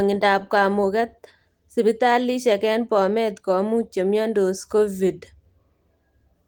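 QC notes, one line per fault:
No fault to note for this speech clip.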